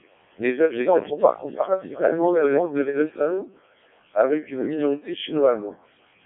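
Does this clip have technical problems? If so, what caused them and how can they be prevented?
Yes. The whole clip has gone through a Codec 2 vocoder, and a heavily squeezed one, which fits its lowest 0.7 kbit/s mode. Only pitch, voicing, energy and a rough spectral shape survive, so the speech is rebuilt from sine waves and sounds robotic and buzzy, confined to 250 Hz to 3.6 kHz. To prevent it, record or send the speech through a waveform codec at a decent bitrate instead of a low-rate radio vocoder.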